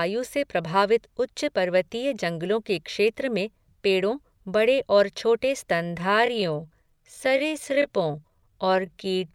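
From 5.74 s to the end of the clip at 9.34 s, the speech abruptly slows to roughly 0.69 times its earlier pace while its pitch stays where it was. This time-stretched section drags. The likely cause is software lengthening the passage by repeating short slices of the waveform. A simple slowed playback would also drop the pitch, but here only the timing changes.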